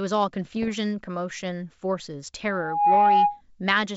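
From 0.45 to 0.70 s, bit errors on an ADPCM link break the speech into pops and gritty bursts with sudden level jumps. Each flipped bit knocks the decoder's step size and predictor off track, so the damage rings briefly. Unlike packet loss, nothing drops out.

From 2.48 to 3.41 s, a loudspeaker feedback squeal rises at 824 Hz. The microphone hears its own loudspeaker, and loop gain above one at that pitch lets the tone grow over roughly 0.4 s to about 10 dB above the speech. Unlike mains hum, it swells from nothing at one unrelated pitch.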